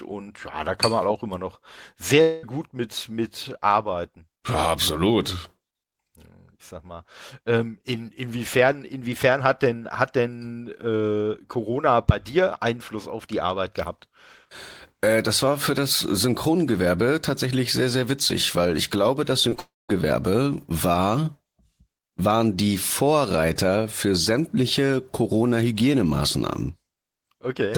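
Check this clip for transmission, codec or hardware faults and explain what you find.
Yes, there are transmission faults: two long network dropouts and two short concealed packet losses in this speech clip.

Short concealed packet loss occurs at 19.49 to 19.53 s and 19.55 to 19.59 s, the second just after "weil ich glaube das". About 20 ms went missing each time. The receiver extended the preceding sound and blended back, causing a brief smear or wobble.

Long network dropout occurs at 2.21 to 2.45 s, just before "gut mit mit arbeiten", and at 19.59 to 19.91 s, after "weil ich glaube das". The likely cause is audio failing to arrive for a long stretch. The first gap, about 0.22 s, is bridged by a fading continuation. The second, about 0.3 s, fades into roughly 0.2 s of silence.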